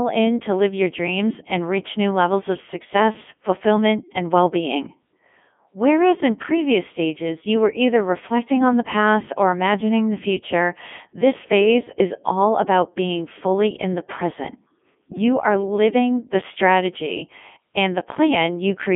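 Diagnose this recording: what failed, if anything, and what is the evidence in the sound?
The failure is at the codec stage: a Codec 2 vocoder runs through the whole clip. The speech is robotic and buzzy from start to finish. It sits in a narrow band of about 200 Hz to 3.5 kHz, with nothing above 3.7 kHz. The decoder never received the waveform. It received only pitch, voicing, energy and a rough spectral envelope, then rebuilt the voice from sine waves. The heavy damage fits Codec 2's top 3.2 kbit/s mode.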